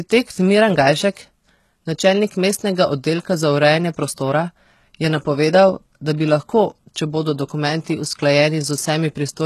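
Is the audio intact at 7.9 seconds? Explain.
No, not quite. Right before 7.9 s, from about 7.84 to 7.87 s, there's pre-echo: a short hiss creeping in roughly 25 ms ahead of a sharp attack, which then sounds soft and smeared. The codec spreads its quantisation noise across the whole transform block, so when a loud onset lands late in that block, noise sized for the loud part spills into the quiet stretch before it.

Around that moment, and throughout, the treble has that gritty, metallic quality, with nothing above 12.3 kHz. That's most likely HE-AAC compression, and a heavy case that fits a very low bitrate around 16 kbps. Only the lower spectrum is really coded, and the top end is rebuilt by copying lower bands upward under a coarse envelope. The harmonics don't line up across that crossover, so sibilants come out lispy and rough.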